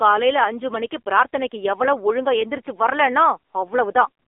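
Speech runs through the AMR narrowband mobile codec for its whole length, with nothing above 3.6 kHz or below 300 Hz. Unlike a plain telephone band filter, heavy coding damage leaves the voice buzzy and synthetic, which fits a low-rate mode around 6.7 kbit/s.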